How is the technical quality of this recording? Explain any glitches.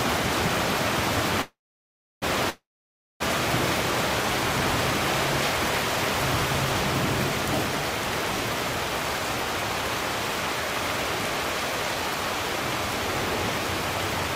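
The recording has two call audio freezes close together. The first runs from 1.41 to 2.24 s and the second from 2.50 to 3.22 s. In each, the last sound carries on as a brief fading buzz or hiss, then drops to silence for about 0.67 s and 0.58 s. The audio then resumes where it left off, with nothing lost. The likely cause is delayed packets draining the jitter buffer, adding 0.8 s and 0.7 s of delay.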